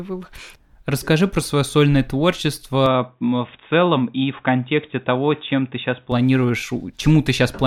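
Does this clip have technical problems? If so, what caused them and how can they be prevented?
Yes. From 2.86 to 6.12 s the speech turns dull and boxy, with nothing above 3.8 kHz. A spectrogram shows the top band cut flat while the waveform level stays unchanged. This is likely an input switched to a poorer device. Locking the recording to one fixed microphone prevents it.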